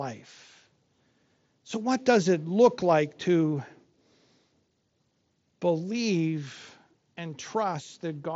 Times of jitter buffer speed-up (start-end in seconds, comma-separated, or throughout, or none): none